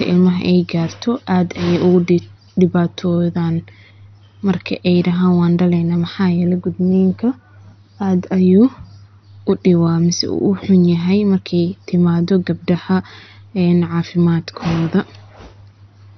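A speech recording runs through with heavy MP2 compression damage. The sound is dull, with nothing above 6.1 kHz. A gurgling, granular roughness sits on every phrase. That points to the likely cause, MPEG Layer II coding at a starved bitrate, which fits a rate near 48 kbps. With so few bits, the coder shuts off whole upper sub-bands and quantises the remaining ones coarsely. At 10.18 s there is a block of digital silence. It lasts about 1.33 ms, which fits a 64-sample block. The signal drops straight out and returns with no fade. A gap this short is heard as a tick or dip rather than an audible hole. This most often happens when the output buffer is not filled in time.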